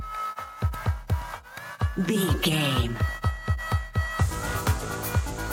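Nothing goes wrong anywhere in the clip, so there's no fault to point to here.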